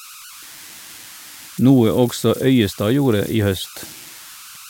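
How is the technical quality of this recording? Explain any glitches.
The recording carries one fault that runs through the whole clip. Converter idle tones are present from start to finish: a delta-sigma converter working without dither settles into repeating bit patterns whenever the input is small, and those patterns produce a tone set by the input's offset. Here it sits at around 1.5 kHz and about 22 dB below the speech, heard as a steady whistle in the pauses and a grainy edge under the quieter passages.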